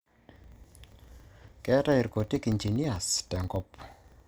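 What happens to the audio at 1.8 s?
At 1.8 s the processing chain is suffering from a filter restarted on every block, a fault that runs through the whole clip rather than appearing only at that moment. The filter discards its memory at each block boundary and starts again from silence, so every block opens with a small transient. These arrive 25 times a second, every 40 ms, giving a ticking buzz at 25 Hz that rises and falls with the loudness of the speech.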